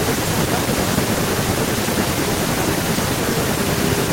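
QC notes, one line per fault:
No fault to note in this speech clip.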